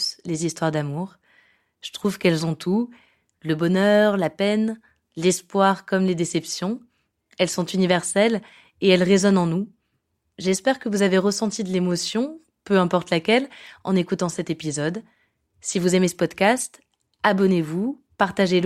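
No technical faults are audible.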